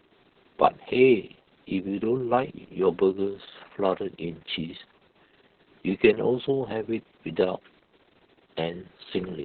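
From start to finish the speech sounds muffled, hoarse and faintly robotic, with everything above about 4 kHz missing. This is heavy Opus voice compression: the SILK coder has narrowed the band and coded the excitation coarsely, which fits a very low bitrate near 6 kbps.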